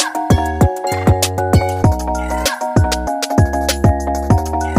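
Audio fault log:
throughout: wrong sample rate. Everything runs 1.5 times too fast and sits 7 semitones higher, which fits 32 kHz material played at 48 kHz. Unlike a pitch shift or time stretch, speed and pitch rise together by the same ratio.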